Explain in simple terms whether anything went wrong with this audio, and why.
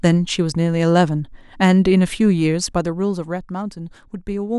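Nothing went wrong with this audio, since the speech comes through without any fault a listener can hear.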